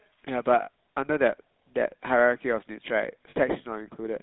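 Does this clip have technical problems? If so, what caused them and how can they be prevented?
Yes. The whole clip carries GSM full-rate codec damage, and it is plainly audible. The speech has a buzzy, gravelly edge. The codec rebuilds the voice from a vocal-tract model fed by a coarse pulse train, and that thin excitation causes the roughness. The line band runs from about 150 Hz to 3.7 kHz, so the upper range is missing. The sound fits the old 13 kbps full-rate coder. To prevent it, carry the call on a wideband codec such as AMR-WB or Opus.

Lost GSM frames cause two short breaks, at 0.62 to 0.68 s and at 3.30 to 3.37 s. Each lasts about 60 ms. That length fits three lost 20 ms frames in a row. The decoder repeats the last good frame's settings, so the sound hangs as a brief metallic ring instead of cutting to silence. To prevent it, improve radio coverage or add stronger channel protection so fewer frames arrive corrupted.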